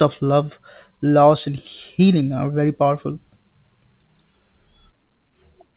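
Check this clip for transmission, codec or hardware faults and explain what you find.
Two related transmission faults are present in this speech recording, both arising from a timing mismatch between the two ends of the call.

Clock drift between sender and receiver runs through the whole clip. The sender's clock runs roughly 5 percent fast, so audio reaches the receiver's jitter buffer faster than it is played out. The buffer keeps overfilling, producing small, irregular timing hiccups throughout.

Repeated timing corrections run from 0.24 s to 5.73 s. To keep pace, the receiver trims short pieces of audio, all in the same direction and unevenly spaced, leaving the speech at about 105 percent speed. The result is a slightly hurried, unsteady tempo with occasional faint skips, heard over a call-codec band that stops at 4 kHz.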